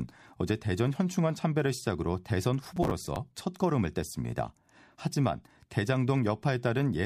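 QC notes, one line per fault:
2.65–3.16 s, processor overload crackle: repeated missed deadlines replay stale audio in hard-edged chunks of roughly 10 ms, giving gritty tearing rather than a single dropout.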